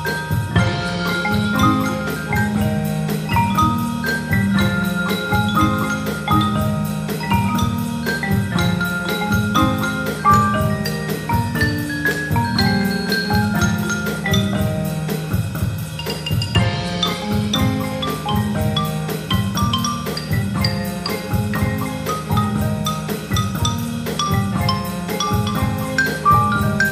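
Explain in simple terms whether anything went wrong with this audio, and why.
Listening carefully, nothing in the audio stood out as having gone wrong, so there is no problem to point to or explain.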